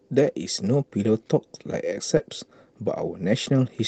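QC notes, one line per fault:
2.17 to 2.21 s, short concealed packet loss: roughly 20 ms of speech failed to reach the decoder in time. The receiver extended the preceding sound to fill the gap, then blended back into the real audio, which leaves a brief smear in the speech.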